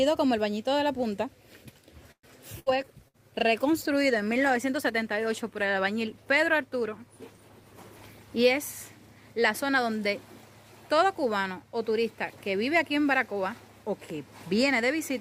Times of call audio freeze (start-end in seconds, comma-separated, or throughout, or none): 2.11-2.26